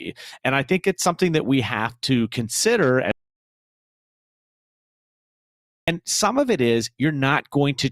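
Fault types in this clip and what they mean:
Audio dropout to silence: the input feed was likely lost, with the recorder writing silence in its place, so the speech cuts off abruptly at 3.11 s and resumes mid-flow at 5.88 s, leaving about 2.76 s of silence with no room tone.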